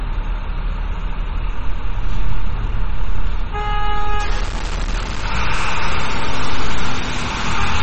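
From the start, the whole clip carries what's likely MP3 compression. Nothing gets through above about 8.3 kHz, so the top end sounds cut off flat, and the damage is plainly audible: a watery, swirly quality where weak frequency lines flicker in and out between frames, plus smeared attacks. That much starvation points to a very low bitrate, something around 32 kbps, where the encoder gives up the treble first.

At 4.20 s it gets worse and stays that way to the end. What's likely low bit depth without dither kicks in, sounding like the signal was chopped down to something like 4 bits by plain truncation. The rounding error rides along with the sound itself, only about 15 dB under it, so quiet sounds turn gritty and grainy. The quieter bits either sputter between steps or drop out to silence.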